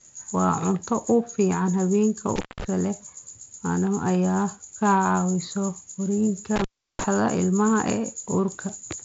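At 2.36 s the speech drops out through an intermittent contact: a loose plug or cable connection briefly opens, and the signal is gone for about 193 ms, bracketed by crackle where the contact breaks and remakes, with only faint hiss left in the gap. It happens again at 6.56 s, just after "caawiso korriinka", this time lasting until 7.04 s with the line open for about 348 ms. The wideband telephone band, cut off near 7.7 kHz, fits G.722 coding at 48 kbit/s.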